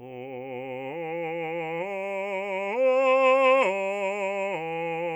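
A short music clip, and there's nothing technically wrong to report anywhere in it.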